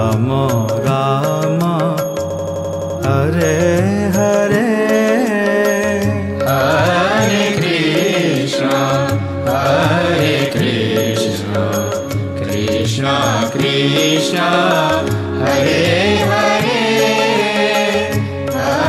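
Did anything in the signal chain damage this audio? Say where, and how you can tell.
Yes. A system hang loop runs from 2.30 to 2.99 s, at the driver or buffer stage. The same piece of audio about 85 ms long repeats exactly eight times, giving a machine-gun stutter at about 11.7 Hz. That length fits a 4096-sample ring buffer: the computer or driver stalled, and the sound hardware kept replaying what was already in the buffer. Little or no audio seems to be missing around the stutter.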